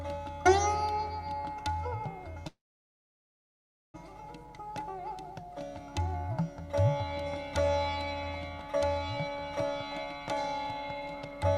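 Packets were likely held up in transit so the jitter buffer ran dry, producing a call audio freeze from 2.47 to 3.96 s. The last sound is briefly stretched, then nearly 1.4 s of silence follows, and the audio resumes where it stopped, now about 1.5 s later.

Afterward the buffer held too much audio, and jitter buffer speed-up trimmed short pitch-period pieces: 9.65 to 10.34 s plays about 15% fast and 10.74 to 11.57 s about 10% fast, each losing roughly a tenth of a second. The pitch stays the same, but the sound feels hurried.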